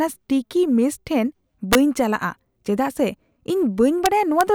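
Integer overflow occurs twice in this speech. A gain or summing stage let the signal exceed the largest value its integer format can hold. Instead of being limited, each excess sample wrapped around to the opposite extreme. From 1.73 to 1.75 s the peaks are overdriven by about 2 dB, and from 4.06 to 4.41 s by about 1 dB. Each wrapped peak lands as a violent crack, much harsher and sharper than ordinary clipping.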